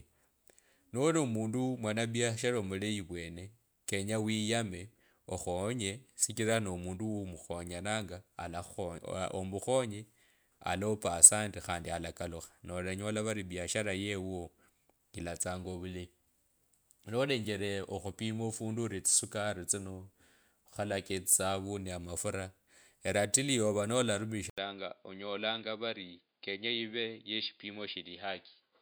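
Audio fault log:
24.50–28.81 s, input switched to a poorer device: the recording likely moved to a lower-grade microphone, after an 80 ms silence. With nothing above 4.9 kHz, the speech turns dull and boxy, slightly quieter, over a faint new noise floor.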